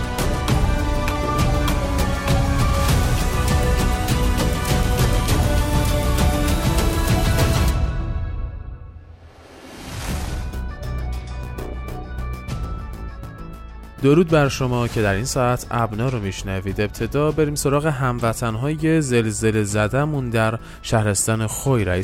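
No technical faults can be heard anywhere in this recording.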